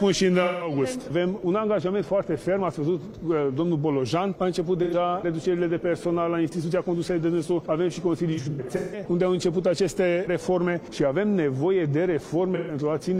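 Smeared, phasey dropouts at 0.43–0.72 s, 4.83–4.94 s and 12.55–12.75 s, plus a broken stretch from 8.33 to 9.04 s with gaps up to about 150 ms, are AAC frame loss with concealment: the decoder rebuilt the missing frames from the last good spectrum.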